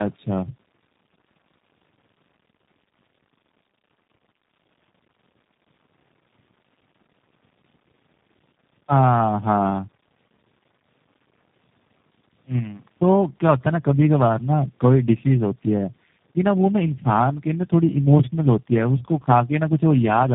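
Tandem speech coding runs through the whole speech clip. The call passed through three speech codecs in a row, decoded and re-encoded at each border. The sound fits a chain of G.729A, G.726 and G.729A. Each stage adds its own damage. Speech sounds rough, muffled and warbly. Nothing reaches above 3.8 kHz.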